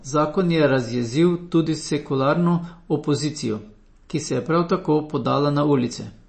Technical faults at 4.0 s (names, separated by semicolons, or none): MP3 compression